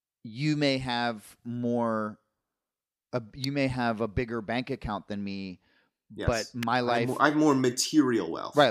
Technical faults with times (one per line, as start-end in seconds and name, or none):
3.44 electrical switching spike
6.63 electrical switching spike